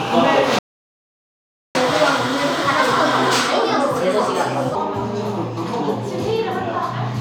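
At 0.59 s the sound cuts out completely. This is a playback stall. Silence lasts about 1.16 s, until 1.75 s. The player likely ran out of buffered data or had its thread blocked. The sound then resumes.

From 1.75 s to 4.75 s comes catch-up at higher speed. The player works through its backlog at 1.25 times normal speed by resampling. Everything sounds hurried and raised in pitch, by about four semitones. At 4.75 s, speed and pitch drop back to normal.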